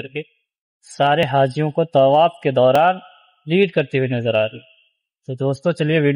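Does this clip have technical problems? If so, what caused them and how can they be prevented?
Yes. A dropped buffer (overrun), likely because the program fell behind the hardware, removed a few milliseconds at 1.23 s and 2.76 s, where the audio jumps ahead. Larger buffers or higher-priority audio threads would prevent it.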